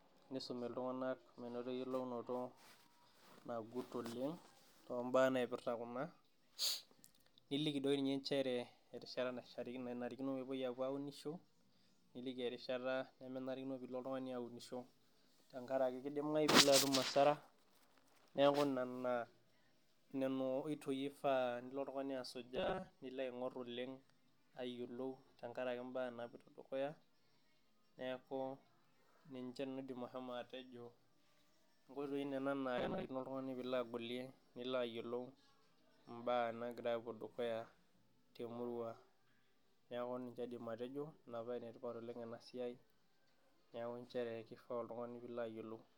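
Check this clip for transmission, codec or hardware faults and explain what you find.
Two short stretches of robotic sound from repeated short buffers appear, at 22.56 to 23.00 s, just after "nilo oltungani", and at 32.78 to 33.08 s. Each sounds like a rigid metallic buzz near 188 Hz that only loosely tracks the speech. The likely cause is audio arriving too slowly, so about 5.3 ms of sound is looped in place of what was lost. That covers most of the first stretch and roughly half of the second.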